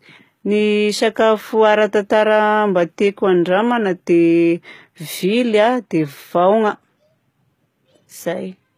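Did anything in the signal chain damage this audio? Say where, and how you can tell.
Yes, at the codec stage, across the whole speech clip: the upper spectrum does not sound like the original. The treble has a plainly audible synthetic quality, with s sounds coming across gritty or lispy, which fits a low bitrate of around 20 kbps. The likely cause is HE-AAC compression: only the lower band is coded, and spectral band replication rebuilds the treble by copying lower bands upward under a coarse envelope, so harmonics fail to line up above the crossover.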